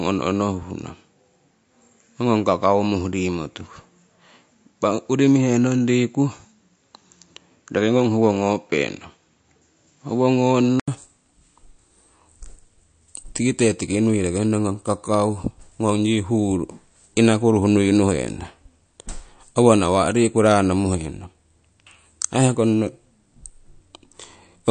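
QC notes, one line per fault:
throughout, MP3 compression: the treble stops dead above 9.1 kHz and the speech has a plainly audible watery swirl, which fits a 48 kbps stream starving weak frequency lines. Likely lossy coding; unlike a device change, the damage never shifts across the clip.
0 to 10.88 s, input switched to a poorer device: the speech is duller, with nothing above 7.6 kHz and faint added hiss far below it. At 10.88 s an 80 ms gap precedes fuller sound at much the same level, pointing to a likely microphone change.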